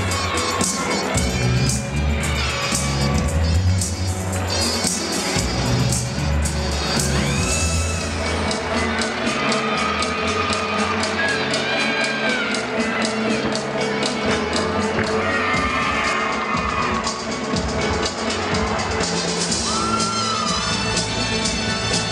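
From 16.13 to 19.37 s the audio has channel delay (comb filtering): one channel lags by roughly two samples, and the mono sum notches out around 10 kHz, dulling the top end.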